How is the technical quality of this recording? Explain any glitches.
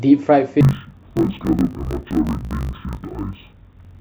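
The recording has one serious fault, interleaved audio read as planar, from 0.61 s to the end of the speech. Each 20 ms block of alternating left-right samples is split into halves played together at half speed, dropping the voice an octave and buzzing at 50 Hz. A spectrogram shows harmonics compressed downward with vertical striping every 20 ms, and the waveform shows a repeating blocky pattern.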